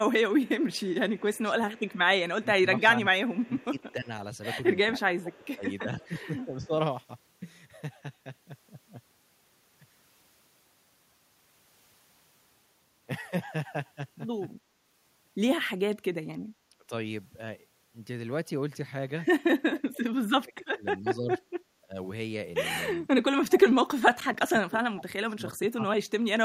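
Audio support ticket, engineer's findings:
Speech suppressed in double talk: level dips and dropouts at 0.0–6.71 s (about 15 dB, roughly 3 s total), 14.67–16.91 s (about 25 dB, brief), 19.64–26.43 s (about 30 dB, roughly 4 s). Likely far-end echo canceller ducking near talker during overlap.

Echo leak: faint delayed copy of the speech, 0.43–6.67 s, trailing by 308 ms, about 30 dB below the direct signal. Likely residual loudspeaker echo passing the far-end canceller and returned in the send path.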